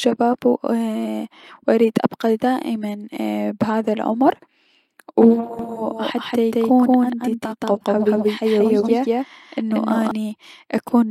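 From 5.59 s to 10.11 s the speech carries a doubled audio track: a second, full-band copy trails the original by roughly 200 ms at about the same loudness, most likely because the signal was captured again through a slower path. It sounds like a dry echo with no room colour, starting and stopping abruptly. On a spectrogram every syllable appears twice, shifted right; the waveform shows duplicated envelopes.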